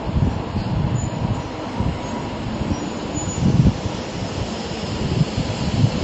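From start to finish the treble stops dead at about 8.3 kHz, and the sound has a watery, swirling texture with smeared attacks. This is likely MP3 compression at a low bitrate, around 32 kbps. Unlike a plain low-pass filter, the missing detail flickers in and out between frames.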